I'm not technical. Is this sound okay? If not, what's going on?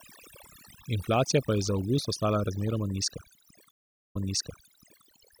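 No. Overdone noise removal runs through the whole clip. A cleanup tool set too strong shuts off any slice of sound resembling background hiss, including the voice's quieter parts, leaving near-silent gaps with faint twinkling specks.

A stream reconnect occurs from 3.71 to 5.04 seconds. The connection dropped, leaving 0.44 seconds of silence, then the player rejoined and restarted. Playback picks up about 0.89 seconds earlier than where it stopped, so you hear that stretch of the voice repeated.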